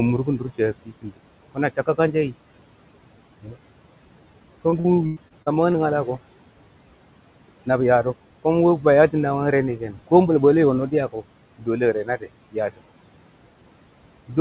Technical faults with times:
0.00-14.40 noise suppressor artifacts
0.26-1.19 speech cut by the noise suppressor
1.55-2.34 speech cut by the noise suppressor
3.42-3.55 speech cut by the noise suppressor
4.70-5.76 repeated packet loss (robotic sound)
9.78-10.09 speech cut by the noise suppressor
11.58-12.82 speech cut by the noise suppressor

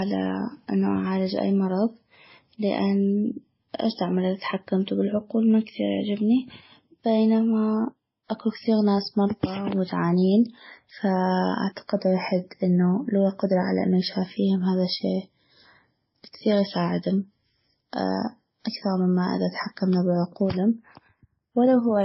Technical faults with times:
0.00-22.05 transcoding between lossy codecs

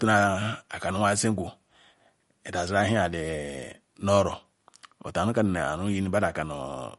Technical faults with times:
0.00-6.99 MP3 compression

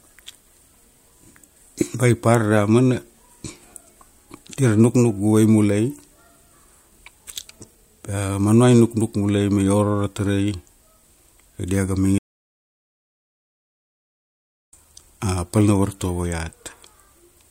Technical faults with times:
12.18-14.73 audio dropout to silence

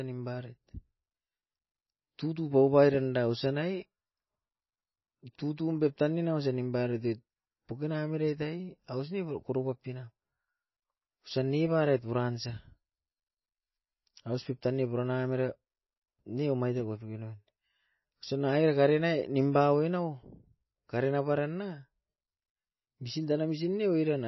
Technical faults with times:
0.00-24.27 MP3 compression

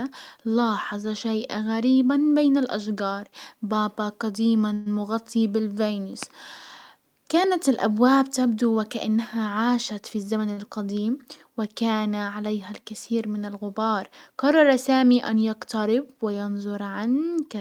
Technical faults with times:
4.73-4.88 call audio freeze
10.15-10.47 jitter buffer speed-up
10.53-10.59 short stall from a late packet

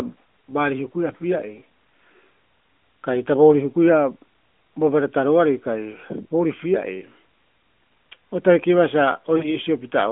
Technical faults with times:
9.38-9.55 lost AMR speech frames

